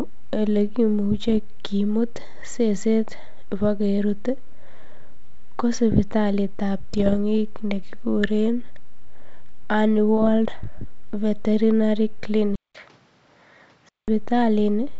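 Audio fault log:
1.28–1.39 s, 6.94–7.16 s and 10.17–10.29 s, bit errors on an ADPCM link: three short bursts of pops and grainy roughness with brief jumps in level, the first just before "kimut seset ibokerut" and the second right after "ko sipitalitab". A few tenths of a percent of the bits got flipped. Each bad bit throws off the decoder's step size and predictor, so the damage rings on for a few milliseconds instead of staying a single click.
12.56–14.08 s, input switched to a poorer device: a gap of 190 ms, then the sound comes back about 5 dB quieter and duller, with nothing above 6.8 kHz and a new noise floor roughly 35 dB under the signal. The gap, the changed tone and the different background all fit the system having likely swapped to another microphone or a headset's call profile partway through.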